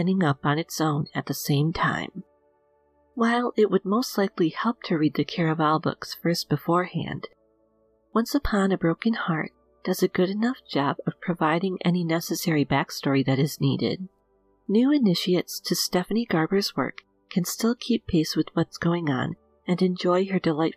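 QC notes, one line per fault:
No faults heard.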